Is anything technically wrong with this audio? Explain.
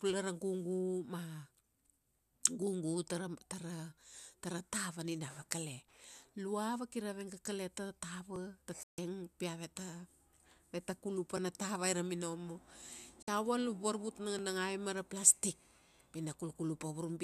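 Yes. Overlapping chunks click at 2.33, 5.35, 8.36, 11.37 and 14.39 s. Each 3-second chunk starts 13 ms early, so a sliver repeats at every join as a regular stutter.

Digital broadcast dropout mutes the speech from 8.83 to 8.98 s and from 13.22 to 13.28 s. The receiver lost valid frames and cut quickly to silence, so that audio is missing.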